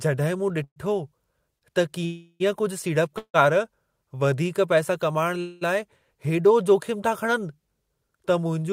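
Call audio freezes occur at 0.64 to 0.78 s, 2.06 to 2.42 s, 3.18 to 3.36 s and 5.40 to 5.63 s. Each likely comes from packets held up in transit while the jitter buffer runs dry. The last sound is extended as a fading buzz or hiss that drops to silence for about 80 ms, 50 ms and 80 ms in the first three and not at all in the last. The speech then resumes where it stopped, with nothing lost but progressively later.

At 1.58 to 1.64 s, a short stall from a late packet holds the preceding sound about 35 ms too long, with a slight buzz or dip. Playback continues from the same point once the packet arrives.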